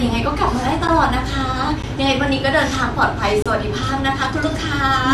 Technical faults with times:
0.87 block of digital silence
1.82 block of digital silence
3.42-3.46 block of digital silence

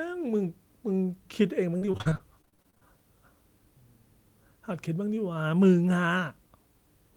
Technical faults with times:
1.77-2.83 repeated packet loss (robotic sound)

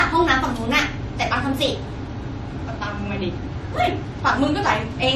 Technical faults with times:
0.00-5.16 transcoding between lossy codecs

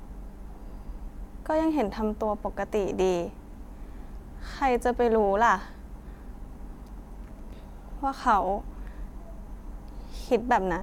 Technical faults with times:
none

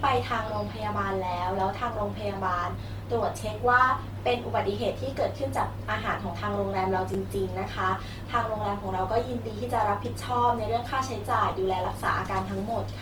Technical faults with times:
0.00-13.01 Opus compression
7.14 repeated buffer
11.51 repeated buffer

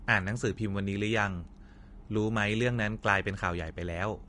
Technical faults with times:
0.00-4.28 Vorbis compression

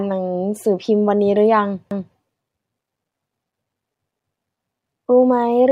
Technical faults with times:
1.91-2.16 overlapping chunks
4.16-4.41 overlapping chunks

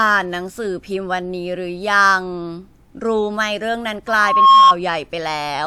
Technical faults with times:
4.07-4.75 loudspeaker feedback squeal

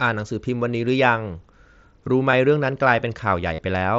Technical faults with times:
2.31 concealed Bluetooth headset packet loss
3.54-3.58 concealed Bluetooth headset packet loss

